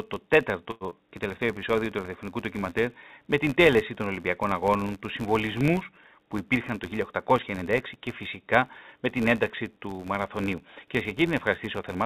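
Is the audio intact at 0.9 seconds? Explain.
No. At 0.9 seconds the audio is damaged by a short concealed packet loss. It runs from 0.90 to 0.94 s, just before "και τελευταίο". About 30 ms of audio never reached the decoder in time. The receiver covered the gap with roughly 12 ms of continuation built from the preceding sound, then blended back into the real signal. What you hear is a brief smear or wobble. The timing tightens by about 20 ms.

Just before that, from 0.71 to 0.84 s, there is a short stall from a late packet. The jitter buffer ran dry. The receiver held the last sound for 97 ms until the packet arrived, then carried on from the same point. Nothing is lost, but the sound hangs too long, with a faint buzz or dip. The audio after it runs 97 ms late.

Under both sits the filter restarted on every block. The filter starts each block from silence instead of carrying its state forward. 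Each block therefore opens with a small transient. These repeat at 86.1 Hz, which fits a 512-sample buffer. The result is a steady buzz that rises and falls with the level. It is heard through the call path's narrow band, which has nothing above 4 kHz.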